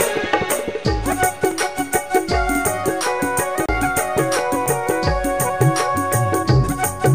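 At 1.51 s there is a block of digital silence. About 2.65 ms of audio drops to silence with no fade. The output buffer was likely not filled in time. The hard edges make it a sharp tick. A second, 5 ms block at 4.66 s sounds the same.

From 3.66 to 3.69 s a CD skip occurs. The laser jumped to another turn of the disc's spiral. Playback mutes for about 30 ms, then resumes from a different place. It is heard as a tick and an abrupt jump in the sound.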